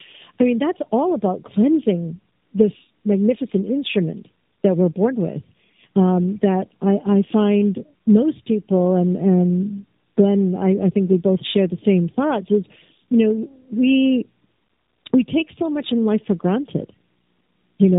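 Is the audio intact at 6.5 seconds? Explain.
No, at 6.5 seconds the call runs through tandem speech coding throughout, two speech codecs re-encoding each other's output, so the speech sounds rough, muffled and warbly, with nothing above 3.8 kHz.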